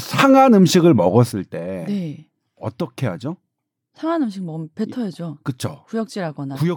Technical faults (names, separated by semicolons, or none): sudden gain jump